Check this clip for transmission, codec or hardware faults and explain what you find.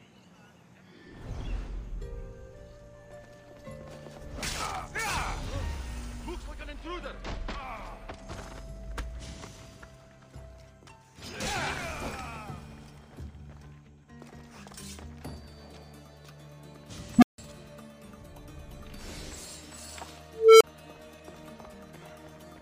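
Two faults, both from an unstable filter. At 17.18 to 17.38 s, a recursive filter stage is running with coefficients that push its feedback past unity gain. A low tone of around 200 Hz swells to clipping within about 40 ms, overflows, and drops to silence for about 160 ms. At 20.33 to 20.64 s, a higher squeal near 400 Hz builds more slowly, over about 275 ms, before cutting out for about 30 ms while the filter resets.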